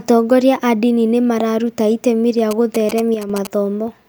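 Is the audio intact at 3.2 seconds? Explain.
No. GSM signalling bursts run from 2.51 to 3.47 s, after "nĩ mararuta itemi rĩa". A nearby phone's radio bursts are rectified, producing galloping short 217 Hz buzzes well below the speech. One channel drops out from 3.14 to 3.30 s, where the speech level suddenly falls by about 6 dB, likely because one stereo channel was lost before the mono sum.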